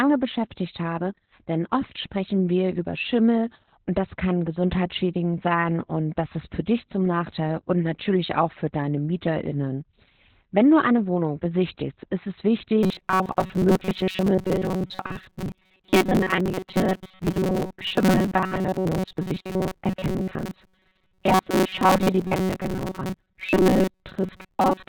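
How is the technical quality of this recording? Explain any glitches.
The recording is heavily degraded throughout, and the second half develops a robotic buzz.

Opus voice compression runs throughout. Nothing sits above 4 kHz, so the speech is muffled and hoarse, which fits narrowband SILK coding at around 8 kbps.

Robotic sound from repeated short buffers begins at 12.83 s, just after "besichtigst ist es", and lasts to the end. The speech becomes a rigid metallic buzz at 188 Hz. The likely cause is a buffer of about 5.3 ms being replayed over most of the audio.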